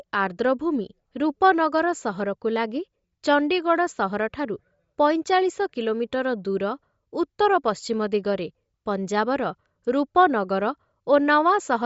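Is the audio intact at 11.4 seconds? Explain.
No. Throughout the clip, including 11.4 s, the speech was likely passed through Bluetooth LC3 compression at a low bitrate, which fits about 32 kbps with 10 ms frames. The codec discards the upper spectrum, leaving nothing above 7.7 kHz, and the coding damage is plainly audible as a breathy, grainy edge.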